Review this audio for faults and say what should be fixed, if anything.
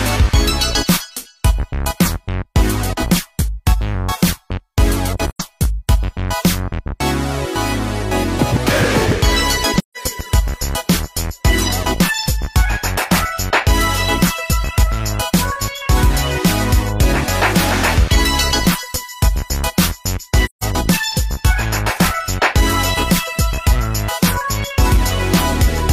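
AAC frame loss with muting occurs at 5.31 s (about 85 ms), 9.78 s and 20.45 s (about 170 ms each). Lost frames were decoded as silence. The sound fades out and back in softly, leaving soft-edged holes. Protect the stream against packet loss, or add concealment in the decoder.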